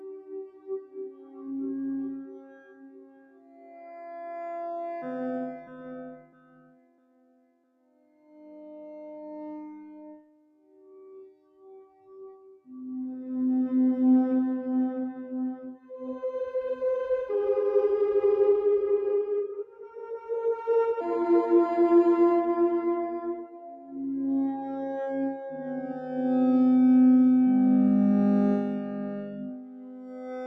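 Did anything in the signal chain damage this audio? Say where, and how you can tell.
Yes. A noise suppressor applied to music or sounds sits in the call-processing stage and stays active through the whole clip. It is built for speech, so it treats sustained tones, ambience and reverberant tails as noise and pulls them down while transients pass. You can hear this as level pumping and thinning, with swings of around 20 dB between the moments it lets sound through and the moments it clamps down.

The sound cut by the noise suppressor shows up as distinct dips at 0.0–4.06 s, 5.58–5.89 s, 6.05–8.56 s, 9.89–12.68 s, 19.61–20.3 s, 23.39–23.98 s, and from 29.47 s to the end. The deepest drops reach about 16 dB, with about 9 dB in the short 5.58 s dip. The steadier, decaying material sinks and its tails are truncated, which is the gain reduction clamping down on sound it misjudged as noise.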